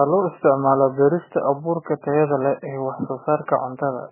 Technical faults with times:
0.00-4.12 MP3 compression

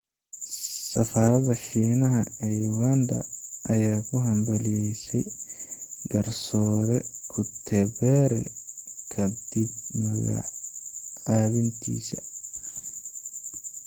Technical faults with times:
0.00-13.86 Opus compression

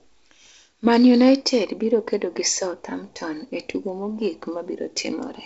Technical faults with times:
none

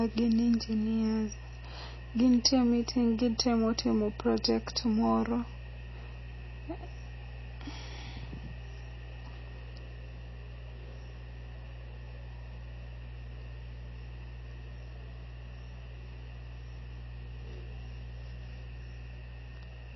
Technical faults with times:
0.00-19.96 mains hum
0.00-19.96 MP3 compression

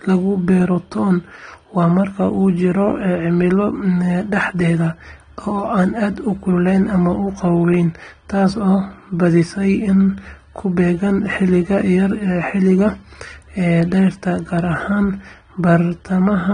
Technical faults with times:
0.00-16.54 AAC compression

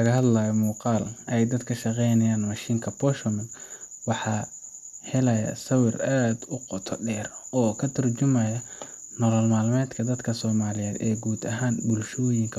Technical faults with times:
none

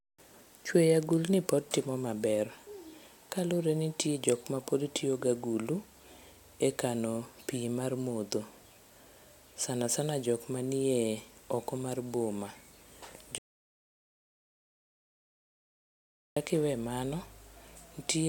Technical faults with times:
13.38-16.36 audio dropout to silence

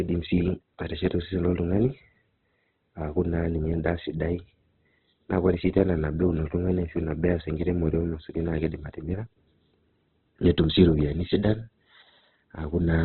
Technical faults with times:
0.00-13.04 Opus compression

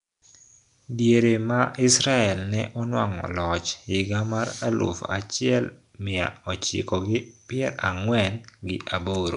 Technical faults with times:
0.00-9.36 Nellymoser compression

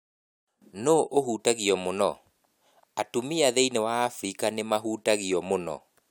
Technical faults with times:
none

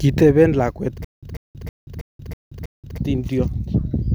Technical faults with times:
1.04-2.98 stutter with silent gaps

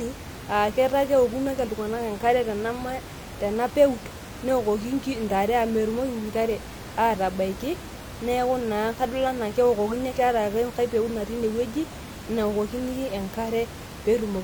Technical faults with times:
none

